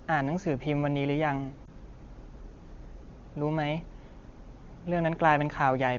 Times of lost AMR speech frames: 1.66-1.69

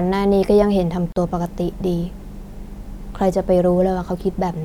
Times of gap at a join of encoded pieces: 1.12-1.16

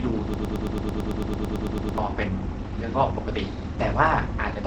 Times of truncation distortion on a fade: none

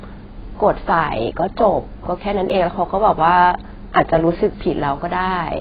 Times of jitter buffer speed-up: none

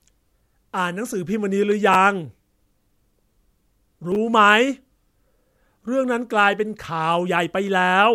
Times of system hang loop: none

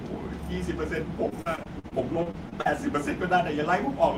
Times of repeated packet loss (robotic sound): 1.29-2.67

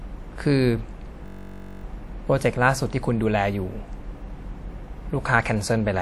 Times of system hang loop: 1.26-1.83

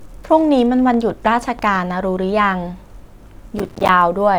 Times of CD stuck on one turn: none

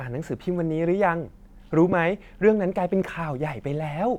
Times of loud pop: 1.92-1.95

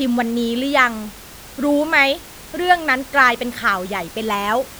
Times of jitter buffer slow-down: none

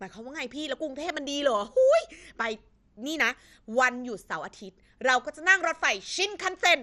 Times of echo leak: none

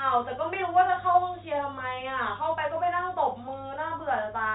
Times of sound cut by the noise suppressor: none

